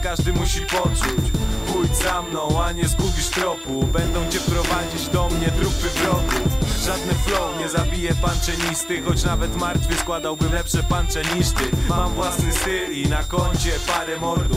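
Switching supply whistle runs throughout: a high tone wandering between 3.55 and 3.73 kHz, roughly 15 dB below the audio, from a power supply cycling audibly as load shifts.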